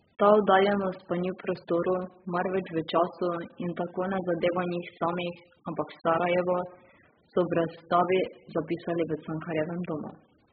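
AAC compression, throughout the speech: nothing above 5 kHz, heavily dull and smeared with warbling sibilants, likely AAC-LC starved of bits, fitting roughly 8 kbps.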